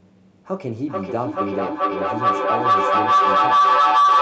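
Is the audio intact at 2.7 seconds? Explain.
No. At 2.7 seconds the speech is under a feedback howl, a sustained tone around 1 kHz, with the loop repeating roughly every 0.4 s, that peaks about 11 dB above the speech. It begins at 0.54 s and runs to the end of the clip. Two devices in the same room are on one call, so sound loops from microphone to loudspeaker and back, gaining level on each trip and narrowing to the loop's favoured frequency.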